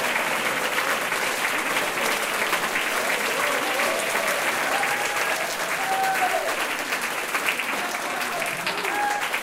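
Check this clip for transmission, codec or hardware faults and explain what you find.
One fault runs through the whole clip: a doubled audio track, where a second full-band copy trails about a tenth of a second behind, a few decibels quieter. It is likely a second capture path or an out-of-step edit. Unlike reverb or echo, the copy has no decay or room colour.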